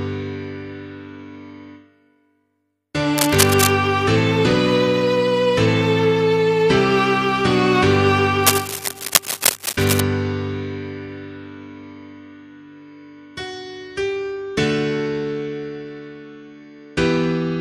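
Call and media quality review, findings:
Cable scratch noise at 3.18 to 3.70 s and 8.44 to 10.01 s. Dense, uneven scratching as loud as the sound. Likely a worn cable or connector moving, varying contact resistance.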